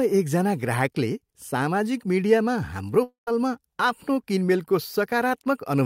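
At 3.03 s the speech suddenly breaks off, and it returns at 3.28 s. This is a long network dropout, and the likely cause is packets that never reached the receiver. For about 0.1 s, the last sound is stretched into a fading buzz. It decays into roughly 130 ms of silence before the speech resumes. About 240 ms of the original audio is simply gone. Speech picks up again mid-flow, with that piece missing.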